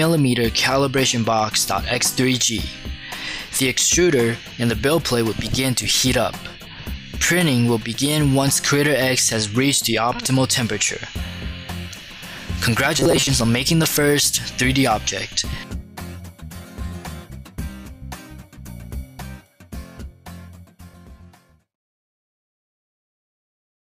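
From 12.97 to 13.27 s the sound goes robotic, with a rigid metallic buzz pitched at 134 Hz. This is robotic sound from repeated short buffers. The likely cause is new audio arriving too slowly, so the playback side kept looping its last chunk of about 7.5 ms, which is exactly what sets that 134 Hz tone. Around half of that stretch is repeated material while the real audio gets skipped, so you still hear the rough shape underneath the buzz.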